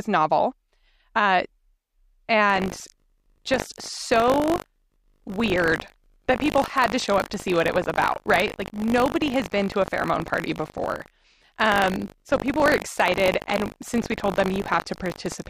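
From 2.48 s to the end, buffer tearing: the ring buffer's writer and hardware reader have slipped and cross inside each 20 ms period, so a small slice of every buffer replays audio roughly 70 ms old. The hard joins produce a 50 Hz robotic rattle under the speech.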